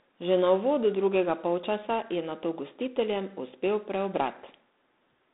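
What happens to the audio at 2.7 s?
At 2.7 s the speech carries G.726 ADPCM damage, present throughout the clip. Each sample is coded as a coarse difference from an adaptive prediction, so a harsh, rasping hiss tracks the speech level, which fits 24 kbit/s, and nothing passes above 3.8 kHz.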